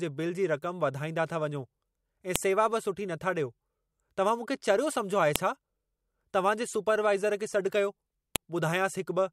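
Speech with a file header played as audio, heard as three sharp, loud clicks at 2.36, 5.36 and 8.36 s, exactly 3.0 s apart. The regular spacing suggests the audio was joined from 3-second WAV pieces whose header bytes were never stripped, so those few bytes play as samples at each seam. On a waveform each shows as a single tall spike; on a spectrogram, a thin vertical line across all frequencies.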